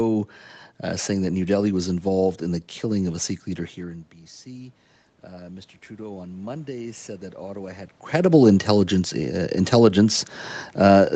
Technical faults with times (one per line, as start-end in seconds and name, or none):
5.33-8.41 automatic gain rising